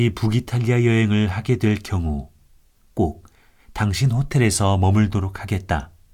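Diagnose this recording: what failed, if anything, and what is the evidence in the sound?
Nothing failed in this recording, and the sound shows no evidence of a fault at any stage.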